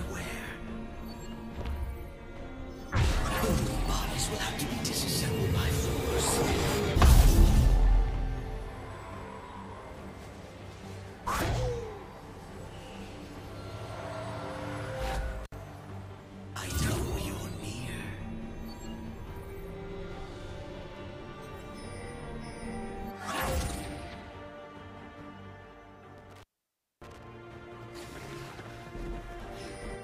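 At 15.44 s the sound drops out briefly. This is an intermittent contact: a loose plug or cable lets the connection open for a moment. The gap lasts about 63 ms, edged with crackle as the contact breaks and remakes. Faint hiss remains inside it. A longer dropout follows between 26.18 and 27.27 s. Here the line stays open for about 0.59 s. Crackle marks both edges.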